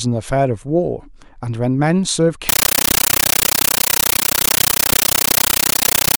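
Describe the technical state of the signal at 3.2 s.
Loud, chattering static replaces the speech from 2.49 s onward: a compressed stream played as audio, with undecoded AC-3 frames heard as 13.3 ms noise bursts 31.25 times a second.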